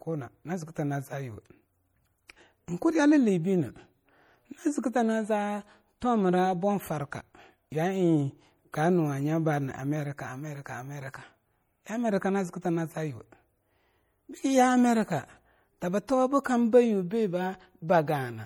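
Throughout the speech, plainly audible MP3 compression artefacts, most likely from a low bitrate near 48 kbps, make the sound watery and swirly as weak frequency lines drop in and out between frames. Content stops at 20.8 kHz. Unlike a plain low-pass, this warbles over time.

At 8.72 s and again at 16.07 s, pre-echo puts a short hiss just ahead of a sharp onset, spreading about 14 ms and 12 ms. The codec smeared noise from the loud attack across the quiet moment before it. Unlike the steady swirl, it sits only before attacks.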